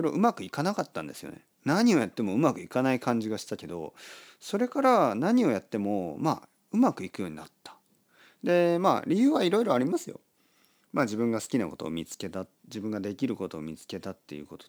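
A faint hiss and graininess rides on the speech from start to finish, growing on loud passages and sibilant, high-frequency sounds and disappearing in the pauses. This is sample clock jitter: the converter's clock wavers by a few microseconds, so each sample lands slightly early or late. Where the waveform changes fastest, that timing error becomes the largest amplitude error, leaving a noise-like residue roughly 35 dB below the speech.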